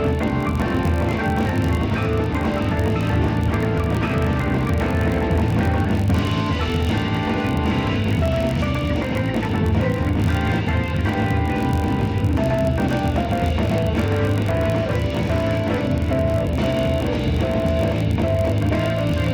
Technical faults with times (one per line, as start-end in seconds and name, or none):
0.00-19.34 filter restarted on every block